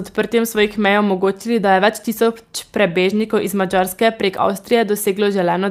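Speech with clock drift between sender and receiver: the sender's clock runs roughly 3% slow, so the receiver's buffer keeps draining and must be topped up. Unlike packet loss, which leaves isolated gaps or smeared dropouts, this causes a steady, one-directional lag across the whole clip rather than random damage. The receiver answers with repeated timing corrections from 0.36 to 5.60 s, repeating short slices unevenly so playback runs at about 98% speed and gains about 150 ms. These are heard, if at all, as faint hiccups and a slightly dragging tempo, not a smooth slowdown.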